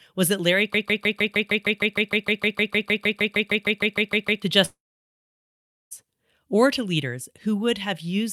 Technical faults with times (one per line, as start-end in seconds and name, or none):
0.74-4.42 broken-record loop
4.65-5.93 long network dropout